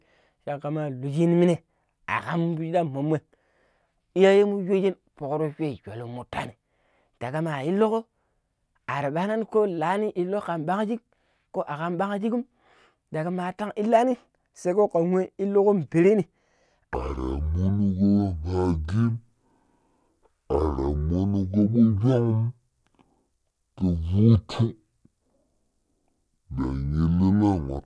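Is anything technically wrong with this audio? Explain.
Yes, there's a wrong sample rate problem from 16.94 s through to the end at 27.85 s. From that point the speech plays at half speed and drops a full octave (12 semitones), so it turns slow, deep and dragging. That's what happens when samples go out at a lower rate than they were captured at with no conversion; this ratio fits 44.1 kHz material being played at 22 kHz.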